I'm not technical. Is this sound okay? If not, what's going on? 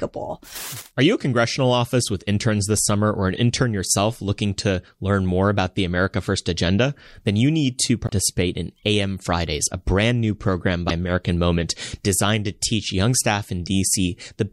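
No, there are two brief glitches in the speech. Right after "you need to", at 8.06 to 8.11 s, and after "a brand new program", around 10.88 to 10.91 s, the sound skips ahead with a tiny chirp or hole. That's likely a broken MP3 bit reservoir: chunks got cut out, so the next bits decode from the wrong data.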